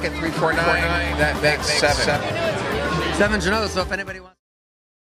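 From 0.52 to 2.16 s a copy about 5 dB quieter trails roughly 300 ms behind and stops abruptly: a doubled audio track, likely captured twice.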